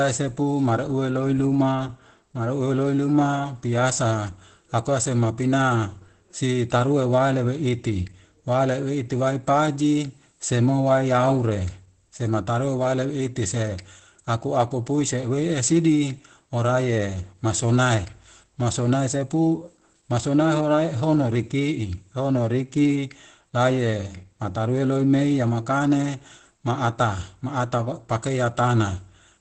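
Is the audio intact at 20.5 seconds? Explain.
No, at 20.5 seconds the speech carries Opus compression damage, as it does through the whole clip. It sounds muffled and hoarse, with nothing above about 8.7 kHz, which fits the codec's speech mode likely running starved at something like 12 kbps.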